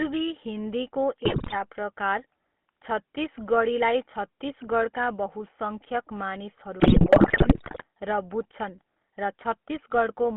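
From the start the speech carries the buzzy, gravelly roughness of the GSM full-rate codec, which rebuilds the voice from a vocal-tract model excited by sparse regular pulses. The damage is plainly audible. The line band runs from 200 Hz to 3.4 kHz, so a spectrogram shows nothing above about 3.4 kHz and smeared, comb-like harmonics below it.

From 1.24 to 1.56 s, and again from 6.8 to 7.84 s, GSM bit errors corrupt the decoder's filter, pitch and gain values. The speech breaks into squawks, pops and gargling. The waveform shows sudden level spikes, and the spectrogram shows frame-by-frame smears and jumps.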